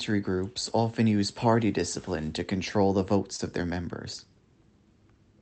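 At 3.36 to 3.40 s, short concealed packet loss: about 20 ms of speech went missing and was patched by extending the preceding sound. This produces a brief smear, visible as a smoothed, repetitive stretch in the waveform and a blurred spectrogram slice.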